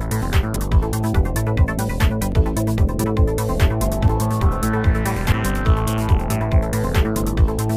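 At 0.56 s the sound jumps forward by roughly 40 ms, and the same thing happens at 3.04, 4.08 and 5.32 s. The one at 2.32 s skips further, around 70 ms. There's no gap, just a lurch forward. That's most likely a dropped buffer (overrun), where the capture side didn't fetch samples before the hardware overwrote them, so the audio on either side got butted together.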